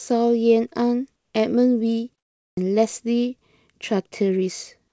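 From 1.16 to 1.34 s, the real background gives way to a flat, even hiss for about 180 ms. It sits about 5 dB below the surrounding background, which is itself quiet, some 53 dB under the loudest sound. This is comfort noise in place of the background. The likely cause is discontinuous transmission: the sender stopped sending during the pause, and the receiver filled the gap with synthetic noise. The texture fits standard comfort noise. It has no detail, only a smooth wash.

At 2.49 s, after a pause of 0.42 s, the sound returns with a clipped start. About 82 ms at the onset is missing, so it jumps in abruptly, without its first sounds. The output device dozed off in the silence and needed that time to wake again. Across the clip, nothing is heard above 8 kHz, as expected from a G.722 call path.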